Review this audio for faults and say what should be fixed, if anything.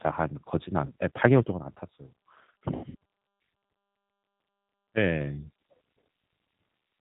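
Throughout the speech there is a narrow, slightly rough and synthetic quality, with nothing audible above 4 kHz. This is G.729 codec damage, here plainly audible: the 8 kbit/s G.729A coder rebuilds each 10 ms frame from a vocal tract filter, a pitch predictor and a few pulses, so fine detail and all upper bandwidth are lost. To prevent it, carry the call over a wideband codec such as G.722 or Opus at a higher bitrate.

From 0.86 to 0.92 s the speech briefly smears into a stretched sound that sags in level. At 2.75 to 2.95 s the same effect returns and lasts longer, breaking up repeatedly before the voice fully recovers. This is VoIP packet loss concealed by the speech codec. The decoder extrapolates from its last pitch and filter while fading the gain. The first gap covers about 40 ms, which fits two 20 ms packets. The second loses about 140 ms scattered over 200 ms, with the longest run 80 ms, so each restart builds on distorted frames. 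To prevent it, reduce network loss with QoS prioritisation, and add a jitter buffer or forward error correction.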